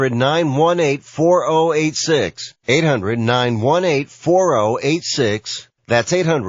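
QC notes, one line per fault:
Throughout: MP3 compression. The speech has a watery, swirling quality, with sibilants turning metallic and chirpy and consonant attacks smeared. It is likely the result of a low-bitrate MP3 encode, around 32 kbps judging by the damage. Starved of bits, the encoder drops the upper treble above a fixed cutoff and discards quieter frequency lines, which then flicker in and out from one frame to the next, producing the unstable, bubbling texture heard across the whole clip.
2.64 to 2.68 s: pre-echo. A short burst of hiss, about 48 ms long, arrives ahead of a sharp onset and sits about 18 dB above the surrounding quiet. The transform block here spans roughly 72 ms and the encoder never switched to short blocks, so quantisation noise sized for the loud attack was smeared evenly back across the silent stretch before it, softening the attack itself.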